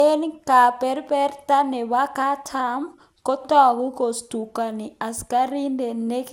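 The speech has most likely suffered generation loss: it appears to have been decoded and re-encoded about seven times through a lossy codec, consistent with MP2 at 128 kbit/s. Each pass requantised the signal on a shifted frame grid, so the noise piled up. Throughout, the speech sounds swirly, smeared and hollow, consonant attacks are blurred, and nothing remains above 17.3 kHz.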